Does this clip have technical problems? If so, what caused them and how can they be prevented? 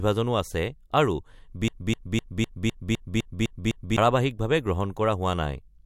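Yes. After "আছে আৰু", a broken-record loop runs from 1.68 to 3.98 s. A 0.25 s fragment repeats nine times, likely from a stalled player resending its buffer. Adequate buffering and stall detection that mutes instead of repeating would prevent it.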